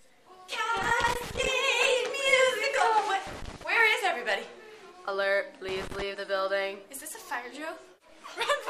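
Loose connector crackle appears three times: from 0.77 to 1.49 s, from 3.27 to 3.64 s, and from 5.69 to 6.02 s. Each burst is an irregular scratching crackle. It comes from a worn or dirty contact intermittently opening and closing, which chops the signal into fragments. Any DC present on the line turns each make or break into a pop. The first burst is the longest, at roughly 0.7 s. The later two are shorter and similar in character.

Compressed frames skipped occurs at 6.13 to 6.15 s, just after the last crackle. Whole frames of the encoded audio were never played, either because they were missing or because the decoder rejected them as corrupt. The jump forward is roughly 50 ms, which fits two frames of 23.2 ms each. The missing material simply vanishes from the timeline.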